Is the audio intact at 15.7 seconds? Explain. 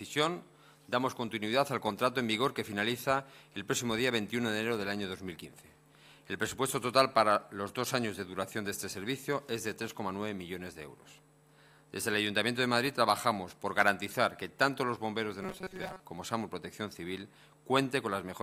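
No, from 15.42 to 16.00 s the sound turns into a rigid metallic buzz at 188 Hz, robotic sound likely from repeating a roughly 5 ms buffer while most of the audio is skipped.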